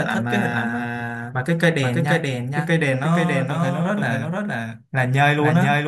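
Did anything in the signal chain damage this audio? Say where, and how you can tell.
Yes: a doubled audio track runs throughout the speech. A full-band copy trails about half a second behind, roughly 5 dB quieter, with no decay or room colour. This likely comes at the capture or editing stage, where a slower second path records the same signal again.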